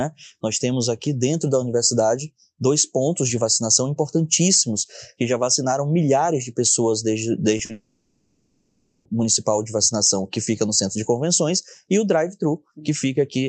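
Speech clip, carried over a call path whose Opus coding at around 40 kbps leaves the spectrogram with no energy above about 8 kHz. Just after "milhares de pessoas desde", two short concealed packet losses occur, at 7.57 to 7.61 s and 7.65 to 7.71 s, covering roughly 20 ms and 40 ms of missing audio. The receiver bridged each hole by extending the preceding sound, which produces a brief smear or wobble. On a spectrogram these appear as narrow stretches where harmonics or noise continue too evenly before real detail returns. On the waveform they show as small, too-regular patches. Immediately afterwards, from 7.71 to 9.07 s, about 1.3 s of audio is lost, most likely to a long network dropout. The gap never falls to silence. Instead, the last sound is continued as a fading buzz or hiss until real audio resumes at 9.07 s, without the part that was lost. A spectrogram shows a smooth, featureless band of stretched spectrum where speech structure should be. 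The waveform shows a steady, decaying envelope rather than the shapes of syllables.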